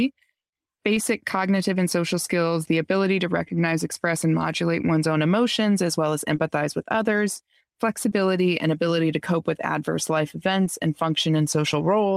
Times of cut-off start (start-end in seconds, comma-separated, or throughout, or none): none